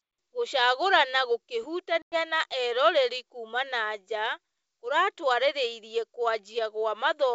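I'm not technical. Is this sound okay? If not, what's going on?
No. There was packet loss on an ADPCM call: at about 2.02 s a handful of data packets never arrived, leaving a hole of roughly 100 ms filled with silence. The speech cuts out sharply, then resumes around 2.15 s slightly unsteady while the receiving end catches up with the sender.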